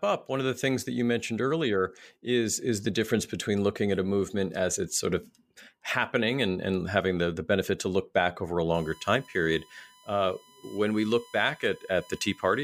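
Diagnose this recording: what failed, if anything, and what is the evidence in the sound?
USB whine enters through the analogue wiring at 8.74 s, right after "look back over a", and continues to the end of the clip. It is a steady fixed-pitch tone at 1 kHz, roughly 30 dB below the speech. On a spectrogram it appears as a thin horizontal line at 1 kHz that runs through pauses. The 1 ms USB frame rate is drawing current in regular pulses, and that ripple is leaking through the shared power or ground into the audio path.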